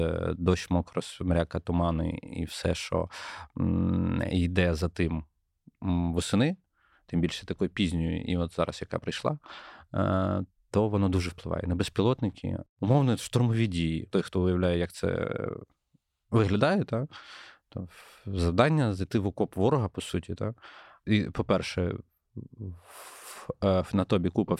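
No technical faults are audible anywhere in the speech recording.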